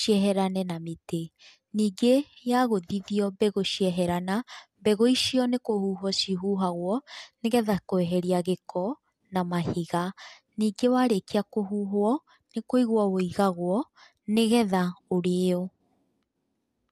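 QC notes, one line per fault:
No faults were heard anywhere in the clip. Nothing here needs flagging or fixing.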